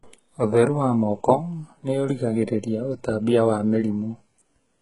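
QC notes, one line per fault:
throughout, HE-AAC compression: the speech shows heavy coding damage and has nothing above 11 kHz. Its treble sounds synthetic, with s sounds coming out gritty, lispy or metallic. The likely cause is HE-AAC at a very low rate, around 12 kbps. Only the lower band is properly coded, and the upper band is rebuilt by copying lower bands upward under a coarse envelope, so the harmonics fail to line up across the crossover.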